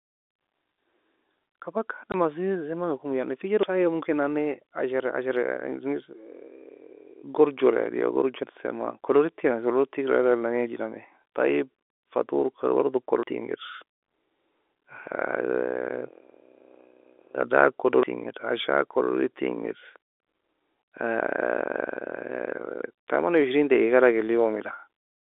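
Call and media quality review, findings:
Packet loss filled with silence: hard dropout 2.12 to 2.14 s, right before "asiee zemenga komo". 20 ms hole, fits a single lost 20 ms packet on the receive side. Jitter buffer or concealment played silence instead of smoothing over it. Band-limited telephone sound from the G.711 path still audible around it. Worth checking whether PLC is enabled on the receiver.

Audio missing between chunks: skips at 3.63 s, 13.23 s and 18.03 s. Each drops around a fifth of a second, with the two sides butted together and no silence in between, so sound jumps ahead mid-flow. Fits 5-second chunks. Likely the recorder or processor losing samples while closing one chunk and opening the next. I'd look at the chunk handoff logic and buffer flush.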